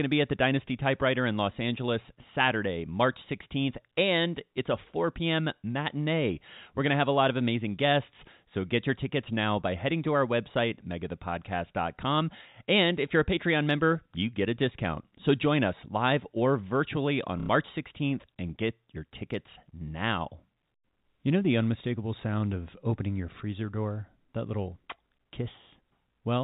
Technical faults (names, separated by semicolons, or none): packet loss with last packet repeated